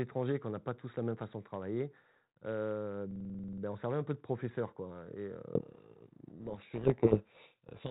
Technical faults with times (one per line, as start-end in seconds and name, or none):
3.11-3.62 system hang loop
5.55-7.90 codec payload misread